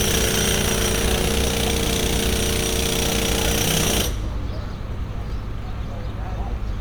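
Throughout, the sound is swirly, hollow and smeared, with blurred attacks and nothing above 19.9 kHz: likely generation loss from about seven MP3 passes, consistent with 128 kbit/s.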